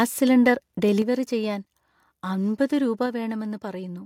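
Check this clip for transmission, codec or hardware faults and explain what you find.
Two kinds of fault are audible in this speech clip.

From 0.46 to 0.48 s there is microphone overload. The peaks drive about 2 dB past the converter's ceiling, likely from input gain set too high. A small share of samples get their tops flattened. That gives a brief harsh crackle.

At 1.02 s the microphone volume steps down. Voice and background drop together by about 5 dB. It happens again at 3.06 s, just after "അമ്പത് രൂപ", by about 3 dB. The likely cause is call software cutting the device's input gain in one step after sensing excess level.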